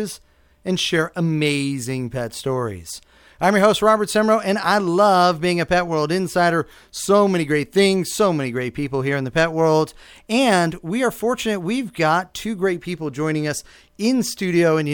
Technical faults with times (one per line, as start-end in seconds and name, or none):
none